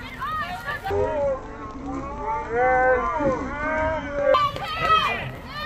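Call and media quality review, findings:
Stereo read as mono, 0.90–4.34 s: sound drops to half speed, an octave low. Channel-count handling in the decode/playback path reads interleaved L/R samples as one channel. Unlike a sample-rate mismatch, a faint mirrored image appears in the upper spectrum.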